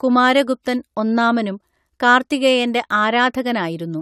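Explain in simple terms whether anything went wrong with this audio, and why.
Something did go wrong, and it runs through the whole clip, start to finish. The speech sounds swirly and hollow, consonants come out smeared instead of crisp, and the top end stops around 16.5 kHz. That's generation loss. The likely cause is that the audio was squeezed and unpacked with a lossy format, probably AAC, about four times over. Each round adds its own small damage, and the damage piles up.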